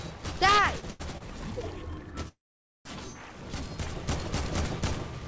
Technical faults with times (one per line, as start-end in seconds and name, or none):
0.80-1.22 short stall from a late packet
2.28-2.87 call audio freeze